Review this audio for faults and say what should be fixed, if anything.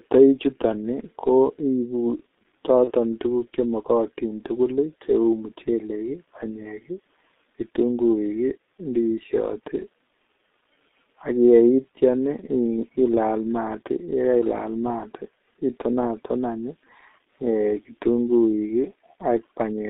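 G.723.1 codec, throughout the clip: the speech is confined to roughly 250 Hz to 3.7 kHz and sounds heavily muffled and hoarse, with smeared consonants. The codec models each 30 ms block with a coarse, slowly updated vocal-tract filter and excitation, which fits its 6.3 kbit/s mode and discards upper-band detail and fine texture. To prevent this, record or transmit with a wideband codec such as Opus or G.722.

VoIP packet loss concealed by the speech codec, from 2.84 to 2.91 s: the speech is briefly stretched and fades, then takes a moment to recover. The length fits a single lost 30 ms frame. The decoder filled the gap by repeating its last pitch and filter at falling gain, and because each frame builds on the previous one, the distortion carried past the gap. To prevent it, carry the call over a network path with less loss or enable forward error correction and a jitter buffer.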